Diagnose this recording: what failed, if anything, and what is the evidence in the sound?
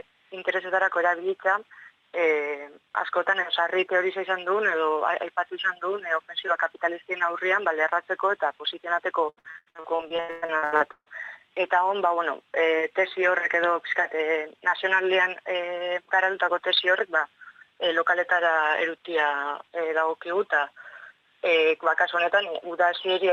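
Network stage: repeated packet loss (robotic sound), 9.29–11.08 s. Frequent gaps up to 139 ms are filled by repeating prior audio, leaving smeared spectrogram blocks and a choppy waveform.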